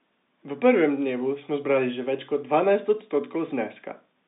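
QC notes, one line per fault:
Nothing stood out on listening to this speech, which comes through the narrow band of ordinary G.711 telephone coding.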